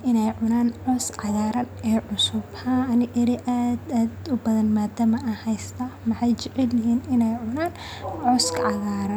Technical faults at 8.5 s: none

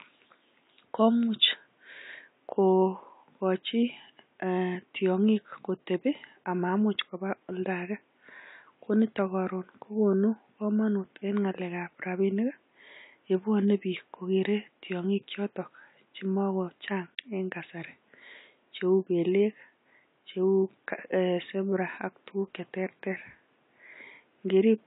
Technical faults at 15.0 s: AAC compression

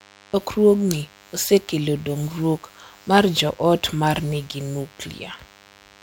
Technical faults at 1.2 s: DECT cordless phone buzz

